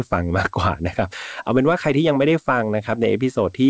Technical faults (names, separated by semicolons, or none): none